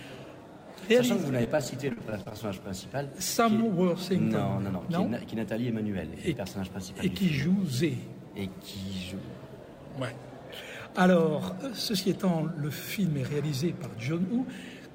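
From 1.41 to 2.33 s the sound turns choppy and robotic: repeated packet loss, with short gaps up to 42 ms papered over by stretching the preceding sound.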